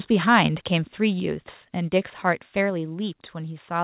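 At 1.2 s and again at 2.7 s, the speech and the background behind it drop suddenly by about 3 dB, each step staying down. This is likely a microphone volume stepped down: the call software lowering the input level in one jump after judging it too hot. The call path caps everything at 4 kHz, which fits G.711 mu-law at 64 kbps.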